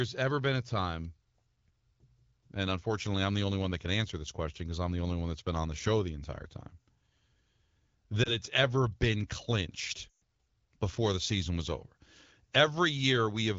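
Lost AMR speech frames occur at 8.23–8.36 s and again at 10.11–10.14 s in this speech. Corrupted frames fail their check, and the decoder fills the gap by reusing the last good pitch and vocal-tract settings while lowering the gain. The first gap is brief and sounds like a short dip, which fits a single 20 ms frame. The second is a longer run of about 120 ms. The sound drops to near silence within two frames, as wideband concealment does, before the speech returns thin or rough.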